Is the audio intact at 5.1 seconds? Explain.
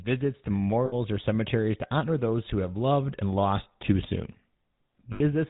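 No. Lost GSM frames hit from 5.12 to 5.21 s, about 80 ms: the decoder repeats the last good frame's settings, giving a brief rough, metallic ring. The GSM full-rate codec also colours this moment, as it does the whole clip, with plainly audible buzzy, gravelly roughness and nothing above 4 kHz, from pulse-driven vocal-tract modelling.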